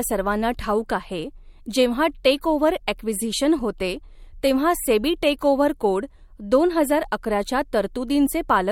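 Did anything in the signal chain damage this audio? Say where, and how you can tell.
Yes. Corrupt frame decoded at the codec stage, at 3.33 s, 4.47 s and 7.06 s: damaged compressed frames were decoded anyway, leaving brief blips at wrong frequencies in the speech.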